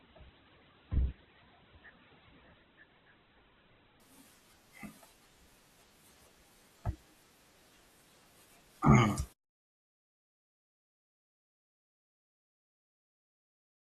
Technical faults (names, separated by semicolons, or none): adaptive stream starting at a low bitrate